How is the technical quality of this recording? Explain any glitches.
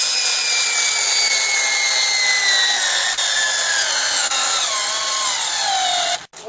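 The recording has three brief dropouts, each patched by short concealed packet loss. It has come through a call path, and nothing is heard above 8 kHz, which fits a wideband call codec.

The dropouts fall at 1.28 to 1.31 s, 3.13 to 3.19 s and 4.27 to 4.32 s. In each, a few hundredths of a second of audio arrived too late to decode, so the receiver extended the preceding sound and then crossfaded back into the real signal. The effect is a brief smear or wobble, longest at 3.13 s, where 40 ms was filled. On a spectrogram these spans show blurred, repeated harmonics or flat noise instead of normal detail. On a waveform they look like a short, overly regular stretch with a soft join at each end.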